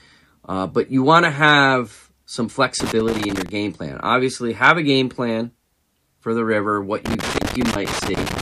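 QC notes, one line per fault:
2.80–3.49 s, loose connector crackle: right after "want to have some", an irregular burst of crackle and scratchy chopping cuts into the speech for about 0.7 s. That's a worn or dirty contact in the cable path making and breaking as it gets nudged. Each break chops the signal, and the contact jumping around produces that ragged scratching rather than a clean dropout.
7.06–8.42 s, loose connector crackle: same thing again after "for the river what", and this time it runs about 1.4 s, right through to the end of the clip. The connection keeps flickering, so the audio is chopped up with uneven crackle for the whole stretch. Worth reseating or swapping that lead before the next take.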